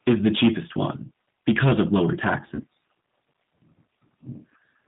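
From start to finish the speech carries G.729 codec damage, plainly audible: nothing above 4 kHz, and a rough, synthetic texture from rebuilding the voice out of a vocal tract filter and a few pulses per frame, which fits 8 kbit/s coding. Unlike wideband codec artefacts, the muffling is a hard band limit rather than smeared swirl.

At 2.55 to 2.62 s comes VoIP packet loss concealed by the speech codec. About 40 ms of audio went missing, consistent with two lost packets. The decoder stretched its last pitch and filter into a brief buzzy tone or coloured noise that fades, and the voice stays weak for tens of milliseconds or more after about 2.62 s. That gradual recovery separates it from a plain dropout's silent gap.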